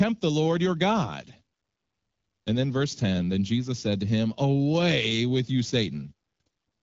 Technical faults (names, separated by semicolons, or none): none